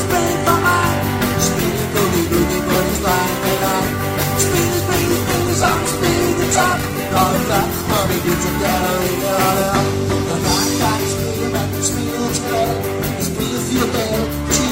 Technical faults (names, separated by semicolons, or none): call bitrate drop